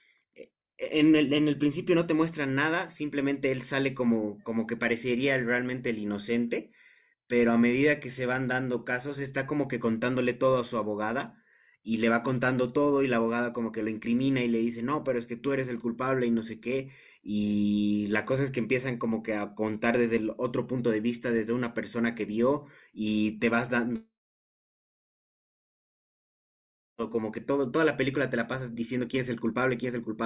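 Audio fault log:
No faults were found anywhere in this speech recording.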